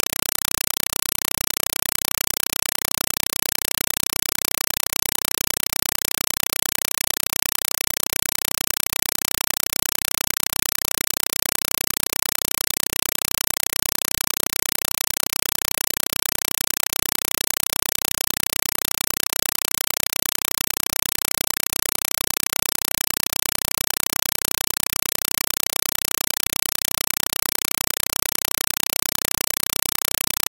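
From start to finish the clip is a compressed stream played as audio: the data from an AC-3 (Dolby Digital) encoder is being treated as plain PCM samples instead of being decoded. Each coded frame arrives as a 4 ms burst of noise followed by silent padding, repeating 31.25 times a second. The result is very loud, harsh chattering static in place of the intended sound, a pattern that fits a 192 kbps stream.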